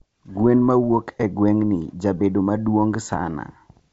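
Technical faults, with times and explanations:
3.05–3.16 s, bit errors on an ADPCM link: a few bits in a thousand are flipped on the G.722 stream, producing pops and a rough, level-jumping burst as the decoder's step size and predictor are knocked off track. The audio garbles and keeps going rather than dropping out, which separates this from packet loss.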